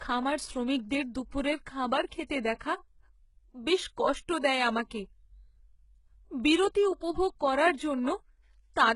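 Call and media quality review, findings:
HE-AAC compression, whole clip. Sibilants gritty and lispy, treble sounds copied up from lower bands rather than real, harmonics not lining up above the crossover. Nothing above about 11.1 kHz. Likely HE-AAC's spectral band replication rebuilding the top end from a coarse envelope. Heavy damage, which fits a very low bitrate, somewhere around 12 kbps. Worth checking the encoder settings on this path.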